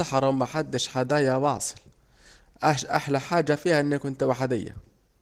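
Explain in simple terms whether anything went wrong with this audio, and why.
Nothing went wrong here: the speech has been squeezed down with Opus voice compression, as is common for calls and voice messages, and that squeezing hasn't left any problem you'd notice.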